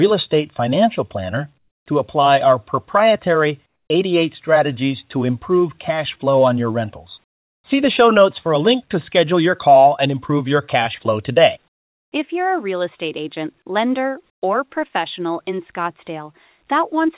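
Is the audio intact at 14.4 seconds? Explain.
No. Comfort noise in place of the background runs from 14.3 to 14.42 s, about 120 ms. The real background, already about 49 dB below the loudest sound, gives way to a steady, featureless hiss roughly 21 dB quieter, then returns when the sound resumes. The likely cause is discontinuous transmission: the sender's voice detector judged the moment silent and stopped sending, so the receiver filled the gap with synthetic noise roughly matched to the background.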